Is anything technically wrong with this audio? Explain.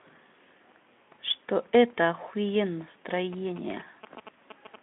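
Yes. From 3.33 to 4.76 s there are GSM signalling bursts. A nearby 2G phone is signalling, and the audio circuit rectifies its radio pulses. The result is a galloping train of short buzzes at about 217 Hz. It sits roughly 15 dB below the speech.

At 4.31 s there is VoIP packet loss concealed by the speech codec. About 20 ms of audio went missing. The decoder extrapolated from its last pitch and filter, so the gap becomes a brief, fading smear. The speech stays weak just afterwards. The Speex coding, band-limited to 200 Hz–3.5 kHz, adds light hoarseness.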